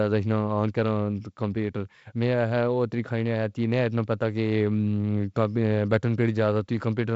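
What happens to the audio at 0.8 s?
Nothing goes wrong at 0.8 s: the speech continues intact through that moment, carried by G.722 wideband telephone coding with its light band-limited character and no energy above about 7.7 kHz.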